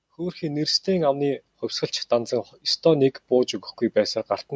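Automatic gain rising from 0.16 to 1.5 s in this speech clip: the gain control judged the input too quiet and raised it about 6 dB, swelling voice and background together.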